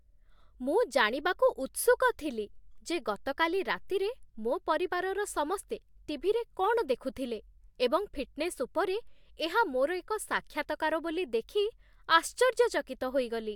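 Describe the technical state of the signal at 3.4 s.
At 3.4 s the speech signal is intact, with no audible fault at that moment.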